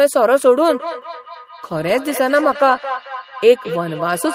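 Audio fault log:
0.69–4.34 s feedback echo between two devices: a second device's playback re-enters the microphone, so speech recurs roughly every fifth of a second, peaking about 12 dB down; spectrogram shows evenly spaced copies.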